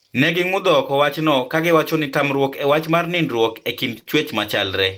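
Speech with three network-loss faults clustered near the end. At 3.95–3.97 s one 20 ms lost packet was rebuilt from error correction, a low-bitrate copy carried in the next packet; the frame sounds rougher and noisier, yet nothing is extended or invented. Right after, at 3.99–4.03 s and 4.03–4.07 s, two short concealed packet losses follow, each about 20 ms: the decoder extrapolated the preceding sound, heard as a brief smear or wobble.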